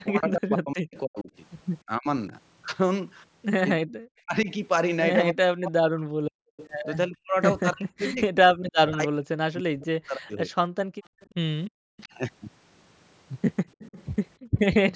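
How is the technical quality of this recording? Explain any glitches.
The recording is marked by echo-canceller trouble throughout, within a call band that stops at 8 kHz.

Speech suppressed in double talk, 0.04–2.33 s and 3.78–10.5 s: the speech dips by as much as about 40 dB, loses its top or breaks up, for roughly one and a half seconds and four seconds in total. The likely cause is the canceller mistaking the talker for loudspeaker echo while both sides spoke.

Echo leak, 6.57–6.70 s, 11.21–12.04 s and 13.69–14.59 s: a copy of the far voice comes back about 298 ms late, around 20 to 25 dB below the speech. This is likely residual loudspeaker sound the canceller failed to remove.

Background gated by the echo canceller, 10.85–11.78 s and 14.38–14.58 s: the room sound drops by about 40 dB, then about 25 dB, for roughly 400 ms and 200 ms, as the canceller clamps the microphone during playback.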